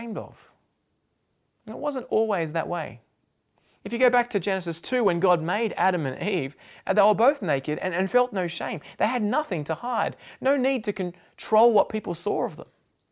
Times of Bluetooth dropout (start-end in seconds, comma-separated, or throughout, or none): none